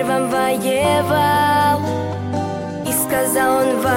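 From 2.94 to 3.28 s, audio breaks into short blips of noise: DAB burbling, as bit errors near half a percent slip past correction, throwing sub-band levels.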